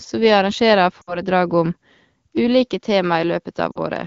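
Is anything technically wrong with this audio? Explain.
Yes, there are two kinds of fault in this speech clip.

Lost AMR speech frames occur twice. From 1.02 to 1.21 s, just after "vi arrangerer", about 60 ms of coded speech, which fits three frames, failed its checksum. The decoder kept reusing the last good pitch and vocal tract settings while fading the gain, so the sound drops to near silence within two frames before the voice comes back weak or rough for a moment. A shorter 40 ms loss at 3.72 to 3.78 s, consistent with two frames, gives a brief drop to near silence.

From 2.37 s to the end, the sound changes character abruptly, and the likely cause is the input switching to a poorer device. There is no gap at the switch and no noticeable jump in level. After it, nothing reaches above 6.7 kHz, so the top of the band is slightly duller and the timbre shifts. A faint new background noise sits far below the speech. 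The AMR-WB coding at 12.65 kbit/s adds only light codec colouring throughout.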